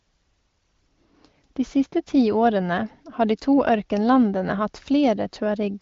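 Speech carried over the AMR wideband (HD Voice) codec at a rate consistent with 18.25 kbit/s, band-limited to about 7.5 kHz, with no technical faults present.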